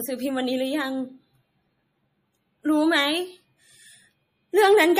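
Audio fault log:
Throughout, MP3 compression: plainly audible watery, swirly artefacts run through the speech, with nothing above 15.2 kHz. The likely cause is an MP3 encoder starved of bits, consistent with roughly 40 kbps, cutting the treble and switching weak frequency lines on and off between frames.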